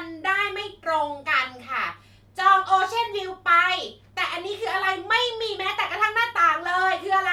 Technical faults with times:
none

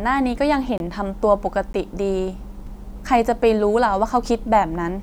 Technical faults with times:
0.78-0.80 block of digital silence
1.73 block of digital silence
2.67 block of digital silence

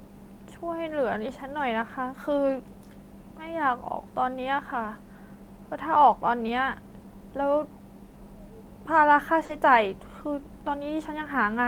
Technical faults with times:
0.89-0.91 lost packet rebuilt from error correction
2.49-2.55 lost packet rebuilt from error correction
8.11-8.15 short concealed packet loss
9.45-9.51 short concealed packet loss
9.49-9.55 lost packet rebuilt from error correction

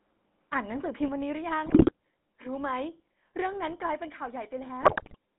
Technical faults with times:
0.00-5.39 GSM full-rate codec
1.66-1.92 GSM bit errors
4.82-5.16 GSM bit errors

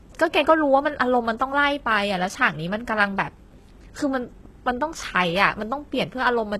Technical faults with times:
0.00-6.60 HE-AAC compression

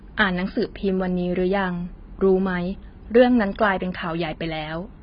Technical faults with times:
0.00-5.02 AAC compression

